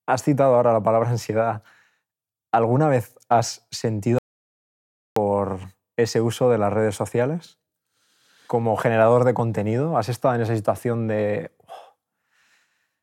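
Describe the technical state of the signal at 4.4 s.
At 4.4 s the signal sits inside an audio dropout to silence running from 4.18 s to 5.16 s, close to a full second of lost speech. The speech cuts off abruptly, and the gap is silent with no room tone or noise floor, before resuming mid-flow. The cause is likely a momentary loss of the input, such as a disconnected device or brief mute, while recording continued writing silence.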